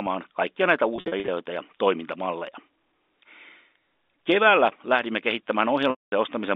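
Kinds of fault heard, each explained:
Packet loss with pitch repetition: bits of the stream went missing and the receiver looped the last pitch period to cover them, so just after "kaikkia näitä" there's a scatter of buzzy holds, and around 5.9 s a longer 0.22 s gap that fades out.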